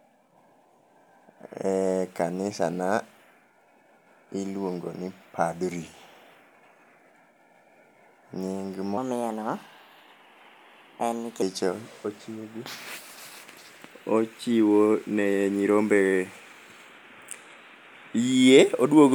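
Likely clocked wrong in playback, a section at the wrong speed from 8.98 to 11.42 s runs 1.25 times fast, raising pitch about four semitones.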